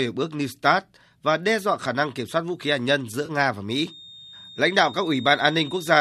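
Just after "khí hạt nhân giữa", from 3.26 to 3.31 s, the speech smears into a brief noisy, phasey patch. This is AAC frame loss with concealment. About 30 ms of audio went missing, which fits roughly three lost frames. The decoder patched the gap from the last good spectrum.

From 3.77 s to the end, a thin, steady whistle near 3.7 kHz sits well below the speech and swells and fades slowly in level. This is a feedback whistle. The likely cause is a loudspeaker-to-microphone loop held just short of runaway.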